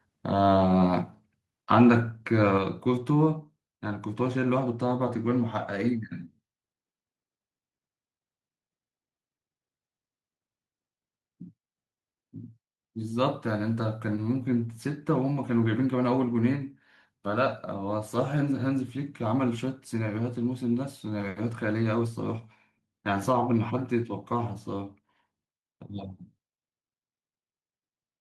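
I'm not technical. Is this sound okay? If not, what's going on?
No. Microphone volume stepped down at 1.02 and 2.58 seconds: the speech and background suddenly get quieter, likely because the call software turned down the microphone's level.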